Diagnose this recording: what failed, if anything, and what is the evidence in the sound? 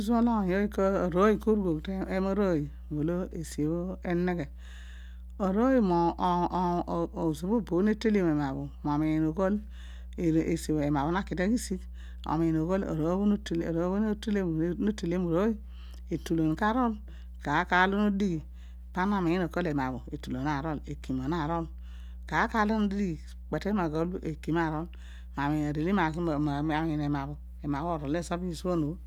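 Mains hum in the analogue wiring: a steady 60 Hz tone with low harmonics sits under the speech for the whole recording, roughly 15 dB below the signal. A ground loop or nearby transformer is coupling the power line into the signal path before conversion.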